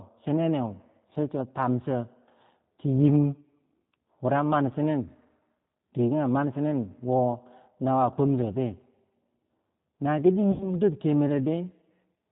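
From start to finish the speech carries the sound of the G.729 codec at 8 kbit/s, and the damage is plainly audible. Each 10 ms frame is rebuilt from a vocal tract filter, a pitch predictor and a few fixed pulses, so voices come out slightly rough and synthetic. Nothing survives above 4 kHz. On a spectrogram the energy stops at a hard ceiling at 4 kHz, with smeared, slightly grainy harmonics below it.

From about 10.52 s to 10.76 s there is VoIP packet loss concealed by the speech codec. About 80 ms of audio went missing, which fits four 20 ms packets. The decoder filled the gap by repeating its last pitch and filter settings at a falling gain. The speech is stretched into a buzzy tone or coloured noise that fades, and it stays weak or distorted for a moment after the real signal returns. The waveform shows a short run of shrinking level. On the spectrogram, flat, unchanging energy replaces the normal formant movement.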